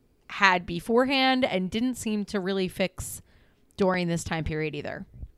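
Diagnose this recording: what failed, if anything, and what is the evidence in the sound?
A loud pop, heard as two pops in quick succession between 3.82 and 3.96 s, sits roughly 10 dB above the speech, which continues underneath. The likely cause is a sudden voltage step or pulse from a plug, switch, static discharge or driver glitch.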